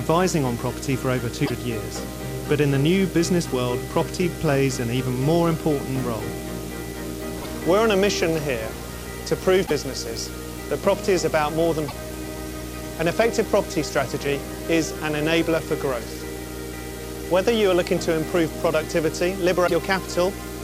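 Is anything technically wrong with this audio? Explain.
Yes, there are two problems. Video or display buzz runs throughout. A screen or video cable couples in, giving a 60 Hz field-rate buzz with hash, roughly 10 dB below the sound. Damaged data in a compressed stream causes five brief blips, at 1.43–1.51, 7.38–7.46, 9.63–9.71, 11.85–11.93 and 19.63–19.71 s. Each time the decoder loses sync on corrupted frames and searches for the next frame header.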